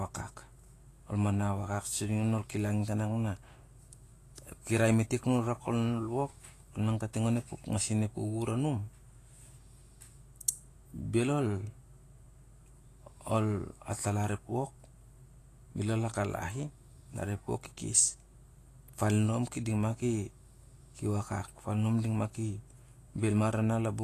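Speech runs throughout with plainly audible Vorbis compression damage, likely from a low bitrate near 35 kbps. Nothing sounds above 14.2 kHz, and the treble beneath that turns hissy and grainy rather than simply dull, which separates it from a plain low-pass filter.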